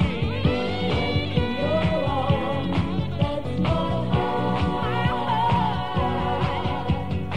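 No technical faults can be heard anywhere in this recording.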